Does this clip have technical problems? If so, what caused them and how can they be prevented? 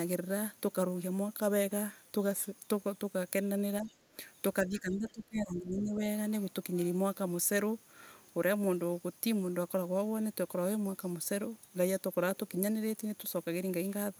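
Yes. The echo canceller likely failed to fully remove loudspeaker playback, so the other side's voice leaks through in faint scraps, well below the talker, at 3.81–3.93, 4.73–4.79 and 5.08–5.12 s. Using a headset, or lowering speaker volume and moving the microphone away from it, prevents this.

Speech suppressed in double talk likely came from the canceller mistaking overlapping talk for echo and ducking both, so the talker dips by up to about 15 dB at 3.82–3.90, 4.13–4.17 and 4.64–6.03 s. A headset or a canceller with better double-talk handling prevents this.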